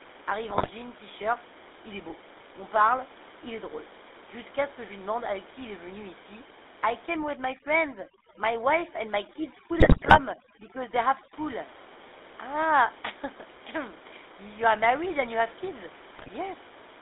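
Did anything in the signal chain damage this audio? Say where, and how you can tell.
Yes. The codec stage is at fault throughout. The speech has the buzzy, gravelly roughness of the GSM full-rate codec, and the band is confined to about 300 Hz to 3.7 kHz, which fits the 13 kbps full-rate coder. The coder models the vocal tract and drives it with sparse, regularly spaced pulses, so voiced sounds turn rasping. This differs from a plain band-limited line, which would sound muffled but clean rather than grainy.

The network stage added GSM bit errors in three bursts: 0.50 to 0.71 s, 9.80 to 10.19 s, and 16.15 to 16.29 s, the last just after "and you have kids". In each burst the speech breaks into squawks, pops and gargling, because corrupted filter, pitch and gain values warp the spectrum or spike the level frame by frame. Packet loss would sound different, giving gaps or smeared repeats rather than this distorted squawking. 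The room noise, about 17 dB below the speech, is part of the recording rather than a fault.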